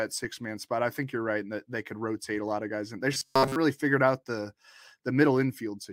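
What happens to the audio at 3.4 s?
At 3.4 s the speech falls into robotic sound from repeated short buffers. It runs from about 3.12 to 3.56 s. The voice becomes a rigid, metallic buzz at a fixed rate near 133 Hz, while still loosely tracking the words. The likely cause is audio arriving too slowly. The playback keeps replaying its last tiny chunk, which fits a buffer of roughly 7.5 ms. Around 70% of the sound in that span is repeated material rather than new audio.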